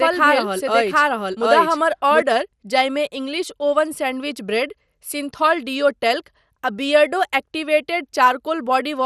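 A second copy of the audio, most likely from an edit or capture path holding two versions out of step, is already running when the clip opens, producing a doubled audio track. The copy trails the original by roughly 0.7 s at much the same level, so every syllable is restated in full a beat later with no reverberant tail or room colour. The doubling stops abruptly at 2.22 s, just before "जाहिमे इंग्लिश ओवन सैंडविच".

Across the whole clip, the signal has been squeezed through MP2 compression, which splits the spectrum into 32 sub-bands and rations bits among them. At a rate that points to around 80 kbps, the upper bands are dropped and nothing remains above 15 kHz, while the surviving bands are coarsely quantised and flicker in and out. The speech sounds dull and plainly carries a gurgling, granular distortion.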